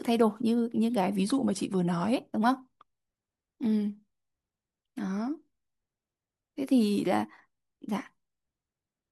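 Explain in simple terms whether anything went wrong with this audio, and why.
Yes, two short stretches are off. From 1.16 to 2.16 s the speech slows by about 5.6% and drops a semitone, then snaps back. From 7.07 to 7.94 s it speeds up by the same amount and rises a semitone. This is likely a drift correction step, where software keeping two clocks in line briefly changed the playback rate.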